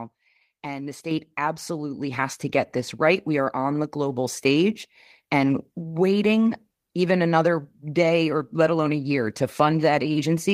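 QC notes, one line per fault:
1.11 s and 2.13 s, microphone volume stepped up: the whole picture jumps louder in one go, by about 6 dB at 1.11 s and about 4 dB more at 2.13 s, just before "to get this right". The speech and the room noise rise together, which gives it away. The call software decided the mic was too quiet and bumped the device input gain in a single step instead of easing it up.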